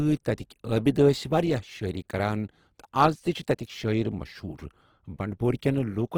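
Throughout, the speech sounds grainy and rough rather than swirly, with bands noise-filled and nothing above 20.2 kHz, likely Opus compression at a low rate around 16 kbps.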